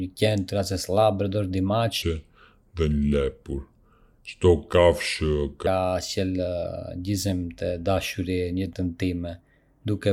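From 2.03 to 5.67 s there's a section at the wrong speed. The speech slows to 0.78 times its normal rate and drops about four semitones, so it goes deep and draggy before snapping back. That's likely an edit or playback step running on the wrong clock.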